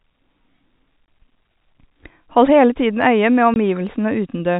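Packet loss filled with silence occurs twice. Audio went missing in transit and the receiver played nothing in its place. From 1.06 to 1.08 s and again from 3.54 to 3.56 s, just after "øye med", the speech drops out for 20 ms, a gap that fits one lost packet each time. Each hole has abrupt edges, so it comes across as a brief break, heard against the telephone band that stops at 4 kHz.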